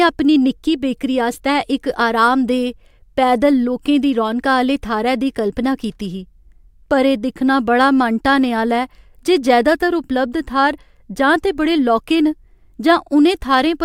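A speech recording with a brief stutter from repeated frames near the end, at 13.05 to 13.09 s. A 48 ms stretch of compressed audio is played twice, adding 48 ms to the length, which fits a couple of frames being sent again. On a waveform the same 48 ms shape appears twice in a row; on a spectrogram an identical slice repeats.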